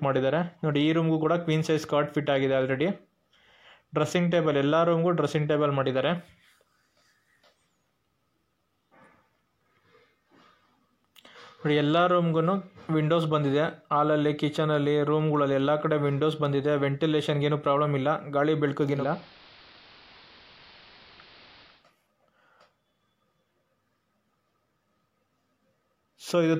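From 18.89 to 21.87 s, digital radio blending to analogue occurs. The receiver lost its digital stream and cross-faded over 242 ms to the AM broadcast. The level dips about 1 dB, and hiss rises, roughly 25 dB under the sound.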